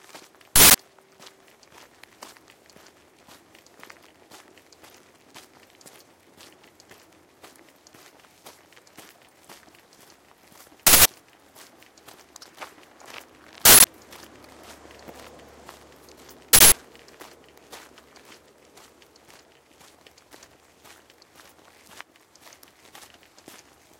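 At 0.56, 10.87, 13.65 and 16.53 s, an uninitialised buffer is heard: an abrupt, loud burst of digital noise lasting about 186 ms. A block was played before audio was written to it, so stale memory was output as samples, which fits an 8192-sample buffer.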